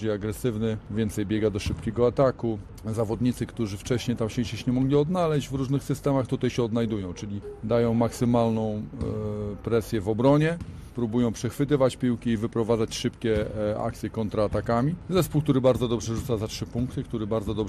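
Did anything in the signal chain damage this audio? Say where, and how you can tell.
Yes. MP2 compression runs through the whole clip, so the damage sits at the codec stage. Throughout, the sound is dull and carries a gurgling, granular roughness, with the top end flickering in and out. That is the likely result of an MPEG Layer II encoder starved of bits, which fits a rate around 80 kbps. Its 32 sub-bands are each given a share of bits. Upper bands keep dropping out, and the bands that survive are coarsely quantised.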